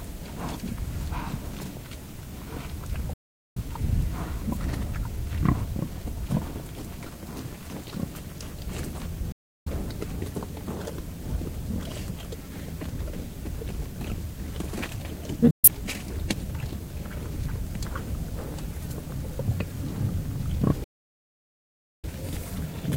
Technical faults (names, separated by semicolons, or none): digital broadcast dropout